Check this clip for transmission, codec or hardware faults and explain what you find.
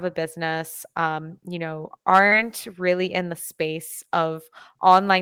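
One transmission fault is audible. At 2.27 to 2.33 s there is short concealed packet loss. About 40 ms never arrived. The receiver extrapolated the preceding speech, causing a brief smear.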